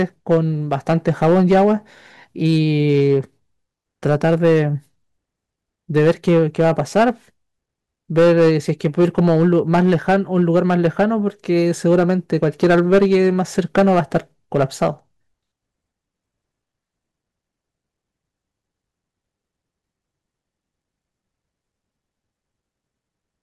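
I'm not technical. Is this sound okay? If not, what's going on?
No. In bursts, the speech turns harsh and fuzzy, with crackle on the loudest parts, from 0.0 to 1.7, 2.45 to 3.17, 4.06 to 4.63, 5.96 to 7.09, 8.18 to 11.04, 11.86 to 14.17 and 14.55 to 14.88 seconds. The stretch at 2.45 is milder. This is hard clipping. The sound was louder than the recording chain could handle, so the tops of its waves were sliced off flat, which adds that gritty buzz.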